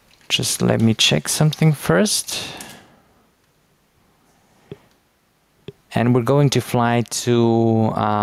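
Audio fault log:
Throughout, gain pumping: gain ducks around 10 dB under loud sounds, unlike a gate's hard cutoff; likely excess gain into a fast limiter.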